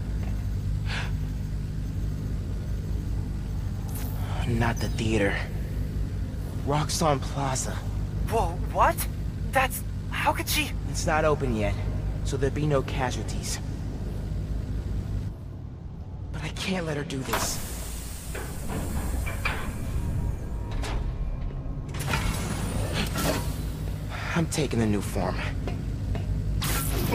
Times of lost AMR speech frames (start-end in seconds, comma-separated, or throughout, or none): none